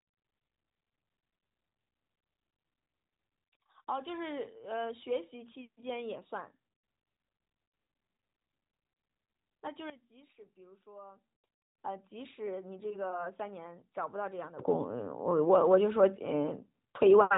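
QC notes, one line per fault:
9.90–11.35 s and 14.59–17.37 s: sudden gain jump. At 9.90 s the level drops by about 15 dB in one step, then snaps back at 11.35 s. At 14.59 s it leaps up by about 15 dB and stays raised to the end. Speech and background noise shift together, with no fade between levels. That points to a digital gain change likely applied without a ramp. The narrowband bandwidth, topping out near 3.8 kHz, stays the same across each step.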